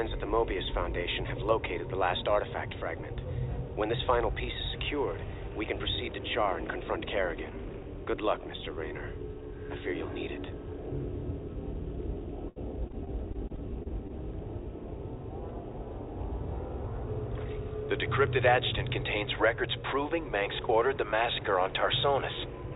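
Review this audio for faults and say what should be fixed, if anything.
Repeated packet loss (robotic sound), 12.48–14.11 s: repeated holes up to 78 ms are patched by extending earlier sound, giving choppy audio with smeared, repeating spectrogram frames. A steadier network connection or a deeper jitter buffer would prevent it.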